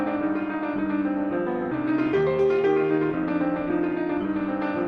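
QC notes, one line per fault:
1.71–1.73 s, skip ahead: about a second of audio is dropped with no fill, so playback jumps forward and the two sides join almost directly.
1.91–4.75 s, jitter buffer speed-up: to drain the excess buffered delay, short pitch-period pieces (around 150 ms in total) are removed, so the sound runs 5% faster at unchanged pitch.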